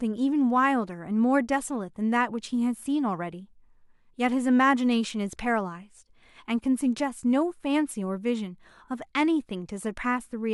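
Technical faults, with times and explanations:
No technical faults are audible; the speech signal holds steady in continuity from beginning to end, with nothing in the transport or processing chain disturbing it.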